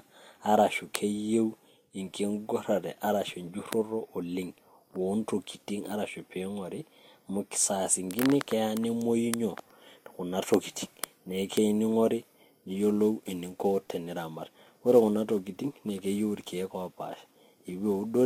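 From 12.66 s to the end at 18.25 s the speech picks up sample clock jitter. The converter's clock wanders by around 10 microseconds, so each sample lands a little early or late, and the error grows wherever the waveform changes quickly. It sounds like a hiss or roughness about 30 dB below the speech, riding on loud and bright sounds and vanishing in pauses. A spectrogram shows broadband noise that appears only under speech energy. On the waveform it is barely visible.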